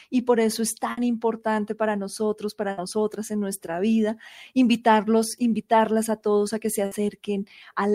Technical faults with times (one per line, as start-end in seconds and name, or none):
0.91-1.00 burst of packet loss
2.71-2.80 burst of packet loss
6.85-6.94 burst of packet loss